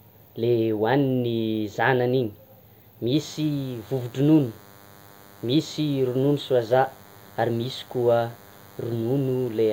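From about 3.14 s right through to the end of the speech, there's a DECT cordless phone buzz sitting under everything. A DECT handset or base nearby is firing a short radio burst every 10 ms, and something in the audio chain is rectifying it, so you get a thin, steady buzz at 100 Hz with a stack of harmonics. It's quiet, something like 30 dB below the speech, but it's constant.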